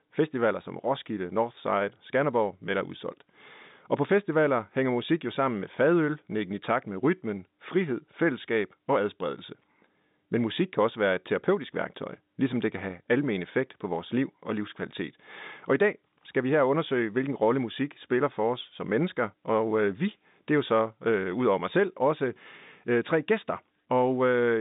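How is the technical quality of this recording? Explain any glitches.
Nothing in this recording stood out as a glitch on listening.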